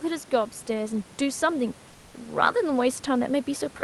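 From 1.91 to 2.13 s, roughly 220 ms, the real room background gets swapped for comfort noise: a flat, detail-free hiss about 1 dB quieter. That's likely Opus DTX, where the sender stops transmitting in the pause and the receiver synthesises filler noise.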